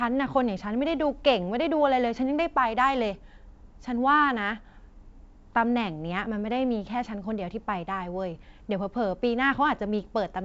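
Nothing in this speech recording stood out as a problem on listening.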